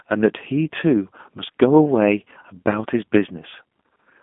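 Throughout, the speech carries plainly audible G.729 codec damage, consistent with an 8 kbit/s VoIP link. Nothing reaches above 3.7 kHz, and each voiced sound is rebuilt from a filter, a pitch predictor and sparse pulses, giving a rough, synthetic edge that simple telephone band-limiting would not add.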